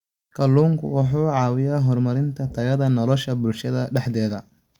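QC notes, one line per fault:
No faults found.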